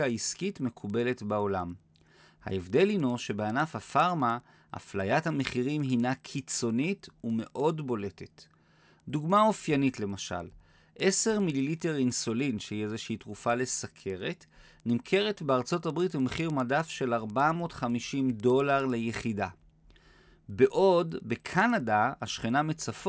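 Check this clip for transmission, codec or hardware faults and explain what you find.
There's one fault, and it runs the whole way through this speech clip: the resampler restarted on every block. The 48 kHz to 16 kHz conversion was done in isolated 100 ms chunks, so each seam is wrong, giving a steady 10 Hz ticking under the speech.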